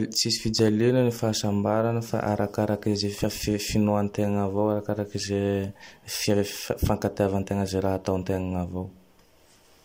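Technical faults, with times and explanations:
0.59–0.70 s, loud pop: two sharp pops in quick succession rise a few dB above the speech just before "ny fahasambaragne fa arakarak", which continues underneath. They are likely a brief voltage pulse, as from a plug or switch. The waveform shows two tall spikes. A spectrogram shows two thin broadband vertical lines.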